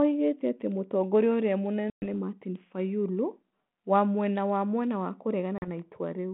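Abrupt silent holes cut the speech at 1.9 to 2.07 s (about 120 ms gone) and at 5.58 to 5.68 s (about 40 ms), each followed by briefly distorted speech. This is packet loss on an ADPCM call: the decoder's predictor and step size briefly drift from the sender's.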